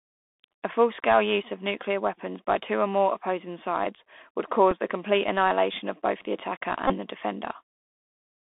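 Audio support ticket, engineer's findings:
Scratchy, granular hiss under the whole speech track; sibilants harsh, nothing above 3.6 kHz or below 250 Hz. Bluetooth CVSD headset codec, consistent with a 64 kbps one-bit delta stream: adaptive step can't track loud high-frequency content, so it slope-overloads and grains.

Short tick at 4.71 s between "more opposing sides would" and "the complete annihilation of", then a brief buzz from 6.87 to 6.94 s after "of both the attacker". Bluetooth headset packet repeated: the lost 3.8 ms slot was refilled with the previous packet, giving the tick. The 22.5 ms gap fits about six lost packets, each replaced by the same one repeated every 3.75 ms, giving a buzz near 267 Hz.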